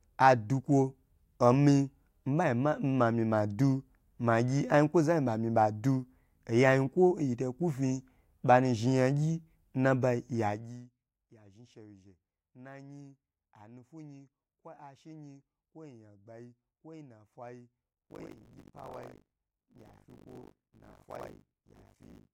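Buffer tearing begins at 18.02 s, right after "kwo ya gbani kwanafai", and lasts to the end of the speech. The writing side and the reading side of the playback ring buffer have drifted until they cross within every period. About two fifths of each buffer replays audio from roughly 70 ms earlier, with an abrupt splice at each boundary. The result is a steady robotic rattle at 50 Hz, which fits a 20 ms period, and it sounds only while speech is present.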